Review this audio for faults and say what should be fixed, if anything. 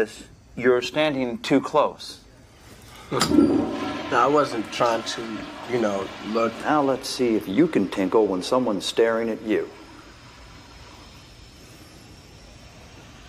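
Nothing to fix: no faults are audible anywhere in the audio.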